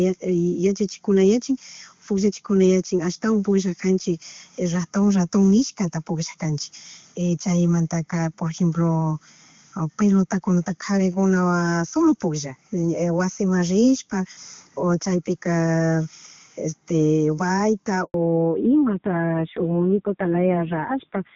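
At 18.04 s the call was passed from one network to another, and no speech frames got through during the switch. The result is a handover gap: the speech dies away within a few tens of milliseconds and a silence of about 100 ms follows, until 18.14 s, when the new link begins delivering audio.

From 18.14 s to the end, the call falls back to narrowband coding, dropping from the clean HD Voice path heard earlier. Nothing above 4 kHz survives, so the speech turns muffled and duller, with a rough, grainy edge that fits a low narrowband bitrate.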